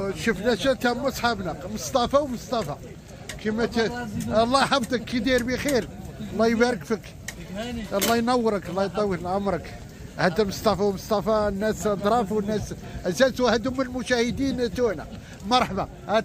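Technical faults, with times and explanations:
No technical faults can be heard anywhere in this audio. There is nothing to list by time.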